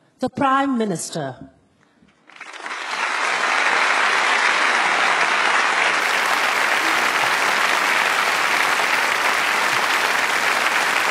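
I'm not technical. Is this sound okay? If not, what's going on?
No. Adaptive stream starting at a low bitrate, 0 to 6.0 s: the player starts fast with a dull, muffled version, then abruptly switches to a clearer one.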